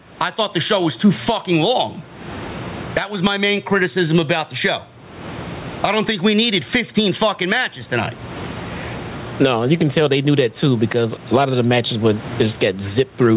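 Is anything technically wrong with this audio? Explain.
Yes. Gain pumping runs through the whole clip. The gain swings by roughly 25 dB. The likely cause is input gain set far too high, with a fast limiter pulling it down on every peak. Loud and soft parts sit close in level. The sound is squashed. The room noise normally sits about 36 dB below the speech. Nothing reaches above 4 kHz, which fits a narrowband call codec such as G.711.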